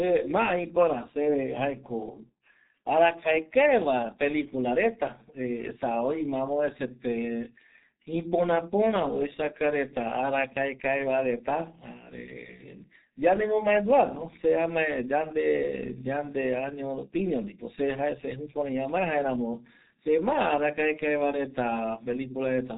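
A speech clip with G.723.1 codec damage throughout. Nothing above 3.8 kHz survives. The speech is muffled and hoarse, with smeared consonants, which fits a bitrate near 6.3 kbit/s.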